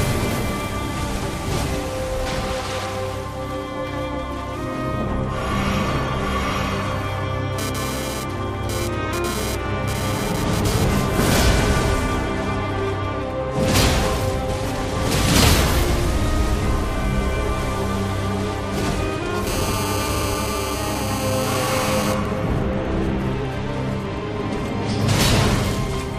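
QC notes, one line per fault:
7.59 to 10.84 s and 19.47 to 22.12 s, GSM phone buzz: A hard, raspy 217 Hz buzz with dense harmonics sits about 8 dB below the signal. A nearby 2G phone's radio pulses are being rectified by the audio circuit. The first stretch comes and goes like a data transfer. The second holds steady like a call.
20.14 to 20.27 s, repeated frames: A short 69.7 ms slice plays twice more, giving a brief stutter. The same compressed block was sent or written again, which fits a run of three frames. The audio runs about 0.14 s longer.
22.13 to 24.18 s, GSM signalling bursts: Even ticks with a longer 217 Hz buzz twice a second follow straight after the steady buzz, roughly 25 dB below the signal. The phone now sends only sparse burst groups, as when its user falls silent in a call.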